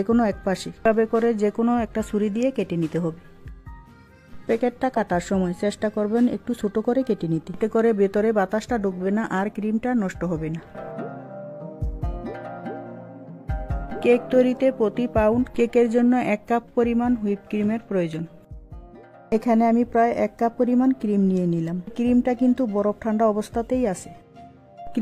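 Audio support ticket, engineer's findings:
No faults found on listening; the signal path shows no dropouts, distortion, timing errors or level problems.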